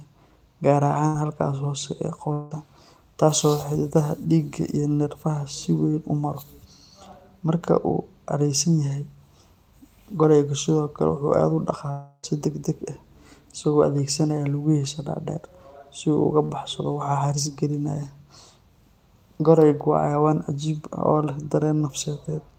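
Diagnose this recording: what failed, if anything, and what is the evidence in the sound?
Network burst of packet loss at 1.07 s and 16.45 s. The last sound is held and faded over each gap. About 60 ms and 40 ms are skipped.

From 2.33 to 2.53 s and 11.91 to 12.25 s, the sound is stretched and fades. The second gap ends in brief silence. Likely a long network dropout.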